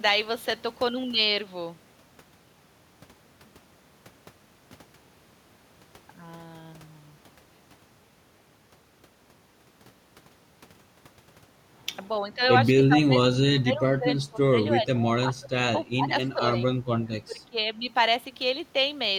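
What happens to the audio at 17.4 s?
The speech is suppressed from 17.26 s to 17.57 s, dropping by around 20 dB for roughly a third of a second before recovering. This is speech suppressed in double talk, likely from an echo canceller that could not tell the near talker from loudspeaker echo while both sides spoke and pulled the whole signal down. On a waveform the envelope collapses into a trough; a spectrogram shows that stretch fading.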